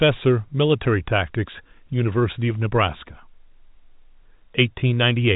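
The speech comes through a standard G.711 telephone coding path, so nothing above 4 kHz is present and only a faint quantisation noise follows the signal level, and no technical fault can be heard anywhere in the recording.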